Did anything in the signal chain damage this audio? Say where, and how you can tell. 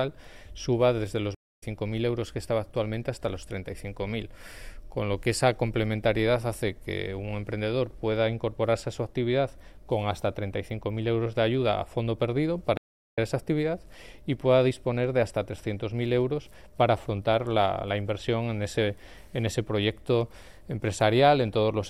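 Yes, there are two stream reconnects at the network stage. At 1.35 to 1.63 s the audio drops out for 245 ms, and at 12.77 to 13.18 s for 369 ms. Each time the sound comes back roughly a fifth of a second further on than where it stopped. That skip is the tell: the connection broke, the player sat silent, then reconnected and began decoding afresh from the live position instead of continuing seamlessly.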